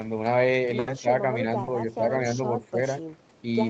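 At 0.79 s there's a burst of packet loss running to about 0.89 s. A run of packets didn't arrive in time to play, so the receiver stretched the last bit of speech it had over roughly 80 ms, fading it down as it went. That gives a short held buzz or hiss instead of real speech. When the stream picks up again, about 80 ms of the original is simply gone, so the speech jumps ahead slightly.

From 1.00 to 1.06 s the speech suddenly sags, dropping by something like 15 dB at its deepest, and then recovers. Altogether it's affected for around 70 ms. That's most likely speech suppressed in double talk. The far end was talking at the same moment, and the echo canceller couldn't tell this talker apart from its own loudspeaker echo, so it pulled everything down for a moment.

At 1.63 s there's a short concealed packet loss lasting to about 1.69 s. About 40 ms never reached the decoder, and the receiver filled it by carrying the previous sound forward before blending back into the real signal. 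It comes across as a quick smear or wobble rather than a clean gap, and the 40 ms in that spot is lost.

The same kind of dip happens again from 2.71 to 2.77 s. It's shallower this time, about 10 dB down, and again touches roughly 70 ms of the speech. It's the same double-talk suppression pattern, with the level ducking while the other side was presumably speaking.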